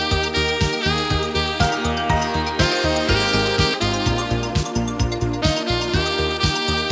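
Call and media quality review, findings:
Skip ahead, 3.74 to 3.80 s: abrupt jump forward, about a second of audio missing, with the two sides spliced almost directly. This points to the jitter buffer discarding queued audio on overflow. Unlike a dropout, there is no silent gap.

Jitter buffer speed-up, 4.53 to 5.42 s: audio runs about 11% fast and sounds hurried. The receiver is trimming pitch-period slices to drain excess delay, around a tenth of a second in total. Pitch is unchanged, which rules out a resampling error. Band limit at 8 kHz fits a wideband call codec such as G.722.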